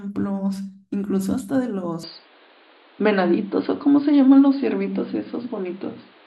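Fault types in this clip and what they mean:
Input switched to a poorer device: at about 2.03 s the speech suddenly goes dull and boxy and stays that way to the end. Nothing comes through above 4.8 kHz, the level shifts by a handful of dB, and a new, fairly faint background noise appears under the speech. There's no gap at the changeover. That pattern most likely means the recording jumped to a narrower-band microphone or a headset's call mode partway through.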